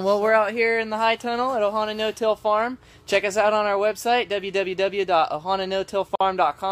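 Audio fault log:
6.15–6.21 s, gap at a join of encoded pieces: two separately encoded segments were joined without trimming the encoder's start delay and final-frame padding, so a 51 ms gap breaks the continuous sound, its edges smeared by the codec, before the sound resumes where it stopped.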